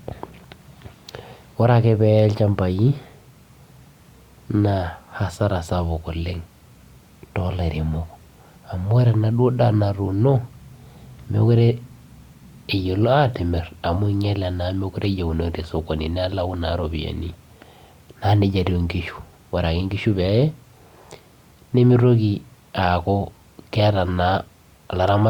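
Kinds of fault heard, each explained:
No technical faults can be heard in this recording.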